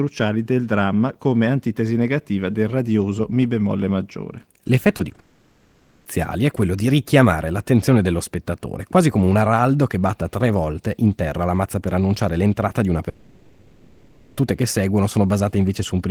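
Packets of this speech arrived too late for the decoder at 4.97, 5.09 and 5.15 s, a short concealed packet loss each time. The receiver covered each 20 ms hole by extending the preceding sound and then blending back into the real signal, so each one comes through as a brief smear or wobble, and a short consonant can drop out.

From 5.19 to 6.07 s comes what is likely a long network dropout. For 860 ms no usable audio reached the receiver, and that whole stretch was synthesised by carrying the last sound forward, never real audio and never falling to silence. It is heard as a droning buzz or hiss in place of the speech. At 6.07 s the speech resumes partway along, with that span simply missing.

The same thing happens again from 13.09 to 14.39 s, likely another long network dropout, this time 1.28 s with nothing delivered. The concealment fills the entire gap with a sustained, artificial continuation of the preceding sound, and the speech picks up afterwards with that stretch lost.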